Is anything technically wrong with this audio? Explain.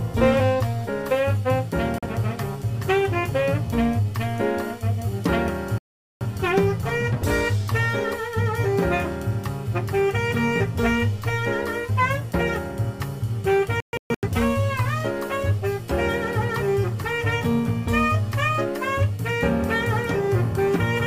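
Yes. There are digital broadcast dropouts at 1.98–2.06 s, 5.78–6.26 s and 13.80–14.28 s. The receiver stopped getting valid frames and muted until clean ones returned. The first two are single silent gaps. The third breaks into scattered short holes, the longest 128 ms. Whatever was sent during each gap is simply missing.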